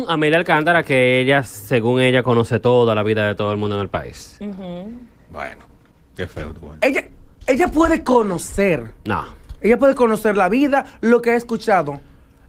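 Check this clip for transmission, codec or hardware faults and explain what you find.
There's one fault here, a call bitrate drop from 3.44 to 9.77 s. The sound goes rough and muffled, like the encoder fell from roughly 32 to 14 kbps, bottoming out for about 4.7 s, so it quantises coarsely and trims the top end before recovering.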